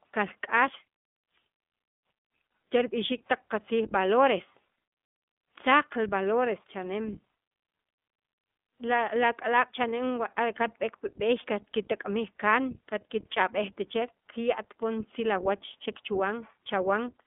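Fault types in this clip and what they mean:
iLBC codec: narrowband VoIP coding in 20 ms frames, each coded independently, leaving the speech plainly rough and synthetic with nothing above about 3.7 kHz.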